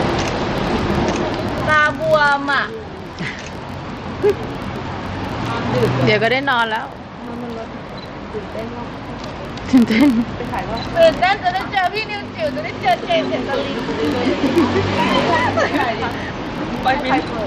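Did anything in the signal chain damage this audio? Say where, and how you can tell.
Yes. A filter restarted on every block somewhere in the buffer-based processing stage marks the audio from start to finish. A steady buzz at about 43.1 Hz runs under the sound and rises and falls with its level. That rate fits a 1024-sample block at 44.1 kHz. The filter drops its internal state at each block boundary and starts again from silence, so every block opens with a small transient. Repeated at the block rate, those transients fuse into the buzz.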